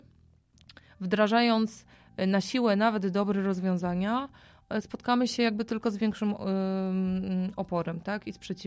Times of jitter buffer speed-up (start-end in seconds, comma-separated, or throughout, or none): none